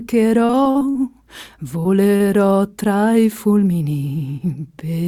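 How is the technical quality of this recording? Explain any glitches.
The recording has network dropouts in its first half.

From 0.45 to 0.97 s, repeated packet loss (robotic sound): six gaps, the longest 44 ms, are patched by extending prior sound. About a third of that span turns choppy, with smeared, blocky harmonics on a spectrogram.

At 1.83–1.87 s and 2.17–2.22 s, short concealed packet loss fills 20 ms and 40 ms holes with continued sound. It is heard as brief smears.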